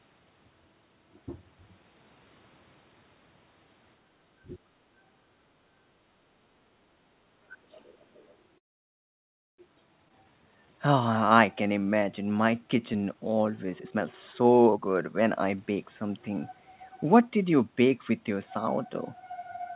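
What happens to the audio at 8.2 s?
At 8.2 s the clip is inside a brief stretch of the other side's voice leaking through, from 7.7 to 8.35 s. A very faint second voice sits far below the main talker, most likely residual loudspeaker playback that the echo canceller failed to fully remove from the microphone signal.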